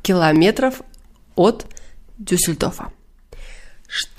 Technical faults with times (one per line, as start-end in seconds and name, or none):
0.36 dropped buffer (overrun)
1.66 dropped buffer (overrun)